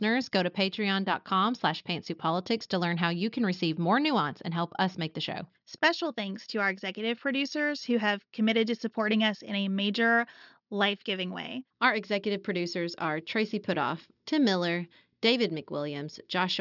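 No technical faults occur at any point in this speech recording.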